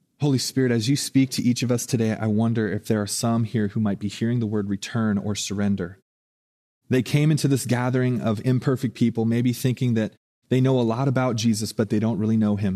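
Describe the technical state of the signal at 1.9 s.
At 1.9 s the speech signal is intact, with no fault present at that moment.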